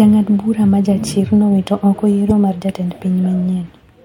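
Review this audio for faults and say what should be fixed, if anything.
Damaged data in a compressed stream at 2.29 to 2.32 s. A brief glitch breaks the speech there. Corrupted bytes made the decoder misread those frames and lose sync. It then resumed at the next valid frame. Prevent it with checksums and retransmission of damaged packets.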